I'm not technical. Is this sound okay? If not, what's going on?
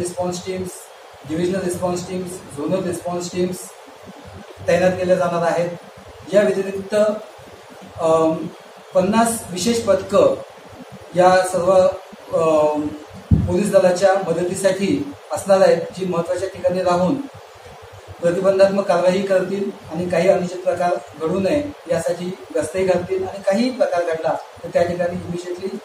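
Yes, nothing wrong can be heard in this recording.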